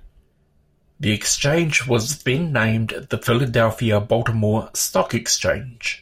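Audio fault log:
No faults can be heard anywhere in this speech.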